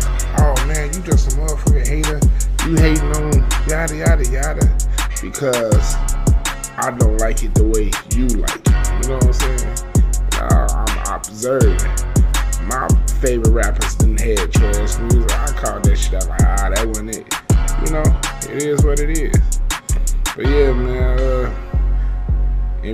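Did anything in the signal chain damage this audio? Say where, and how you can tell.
No, nothing along the signal chain has left an audible mark on this audio. No stage, from capture through to playback, shows any sign of having damaged it.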